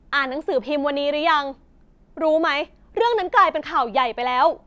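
Nothing stood out on listening to this speech recording.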